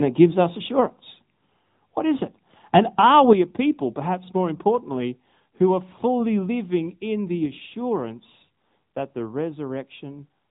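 From start to finish the speech carries the sound of the AMR narrowband mobile codec. Nothing above 3.8 kHz survives, so the speech sounds boxed in and dull. The codec rebuilds the voice from a simple vocal-tract model fed by a few pulses per short subframe. At this rate the damage is plainly audible. There is a buzzy, synthetic edge on voiced sounds. Consonants lose their crispness. That level of coarseness fits a mid-range bitrate of around 10 kbps.

At 3.16 to 3.19 s a loud peak turns briefly harsh and crackly. Its top sounds flattened. This is likely microphone overload. The input gain sat slightly too high, and the peak pushed past the converter's ceiling by about 1 dB. Only a small fraction of the waveform was sliced off. That is enough to add a short, gritty distortion to the syllable.

At 3.33 s the level of the speech and the background suddenly falls by about 7 dB. It happens in one step, with no gradual fade. 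The drop comes just before "a people perhaps more". It follows closely after the distorted peak. That timing points to microphone volume stepped down, most likely by the call software reacting to the clipping. From then on the speech sits noticeably quieter.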